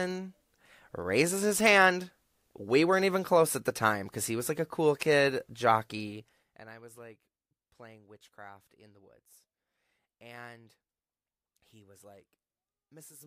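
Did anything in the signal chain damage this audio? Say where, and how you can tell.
Yes. Zipper noise from about 6.01 to 6.76 s, right after "like a cool kid", in a gain stage: the level drops by roughly 20 dB in unsmoothed jumps, around 50 a second, each a little click. That rate fits per-buffer updates. It clears before "was like playing witchcraft".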